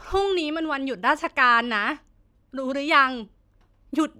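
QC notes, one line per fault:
Nothing stood out on listening to this speech recording.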